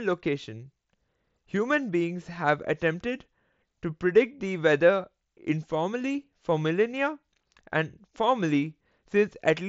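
Nothing goes wrong anywhere in this speech clip; it's simply carried over an mSBC Bluetooth headset link that tops out at 8 kHz and adds a light grain on the louder moments.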